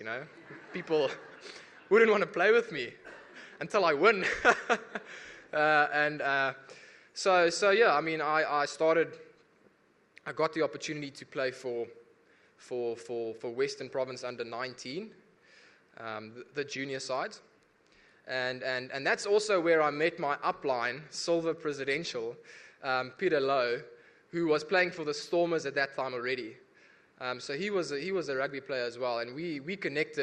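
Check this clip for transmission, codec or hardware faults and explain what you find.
Nothing wrong can be heard anywhere in this audio.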